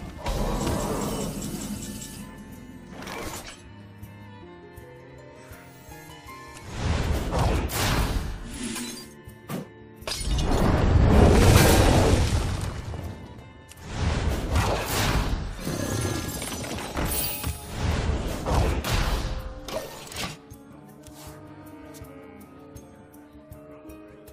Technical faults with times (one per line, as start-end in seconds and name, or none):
none